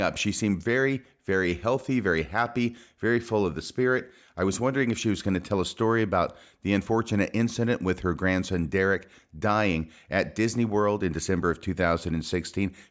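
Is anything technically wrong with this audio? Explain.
No, nothing technically wrong can be heard in this speech recording; the signal stays intact and steady throughout.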